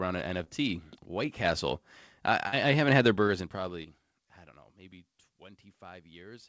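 At 0.44 to 0.48 s the first short concealed packet loss occurs: about 20 ms of the call arrived too late for the decoder, and the receiver bridged the gap by extending the preceding sound for roughly 23 ms before blending back into the real signal. The result is a brief smear in the speech. At 1.44 s the microphone volume stepped up: the call software judged the input too quiet and raised the device gain in a single step of about 5 dB, so speech and background jump louder together at once. A second concealed loss follows at 2.48 to 2.54 s. This is a longer 40 ms hole, filled with 40 ms of synthesized continuation, which gives a wobble in the speech. At 2.88 s the input volume steps up again, this time by about 2 dB, a smaller but still abrupt lift in overall level. The last concealed packet loss, at 3.82 to 3.86 s, covers about 20 ms just before "I don't know maybe". There the decoder's stand-in audio leaves a brief smear. 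Throughout, the call path's band limit means nothing is heard above 8 kHz.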